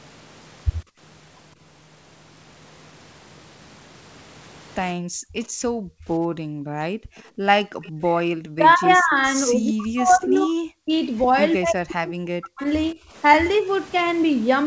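At 0.84 to 1.0 s the room background is gated by the echo canceller. While the far-end loudspeaker plays, the canceller clamps the microphone, and the background drops by about 25 dB for a brief moment before returning. A longer episode runs from 4.95 to 7.92 s, with the background pulled down, at its deepest by about 39 dB, for roughly two seconds in total. The ambience audibly hollows out and then springs back when the canceller releases.

Inside that stretch, an echo leak appears at 7.18 to 7.22 s and again at 7.82 to 7.91 s. These are faint delayed copies of the far-end sound, trailing by about 177 ms and sitting about 35 dB and about 30 dB below the main speech. They are most likely residual loudspeaker pickup that the canceller failed to subtract and sent back.

From 8.21 to 10.92 s, speech is suppressed in double talk. The talker's level dips by as much as roughly 40 dB, for about two seconds in total. 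The likely cause is the canceller mistaking near-end speech for echo while both ends are active and attenuating everything. At 10.35 to 10.39 s another brief echo leak appears within this stretch, delayed by about 181 ms and about 30 dB down, most likely the same residual loudspeaker pickup.

From 11.59 to 12.99 s, the double-talk suppression returns, pulling speech down for about a second in total with similar depth, likely from the same misjudgement by the canceller. Throughout the clip, nothing is present above 8 kHz, which fits a wideband call codec such as G.722 at 64 kbps.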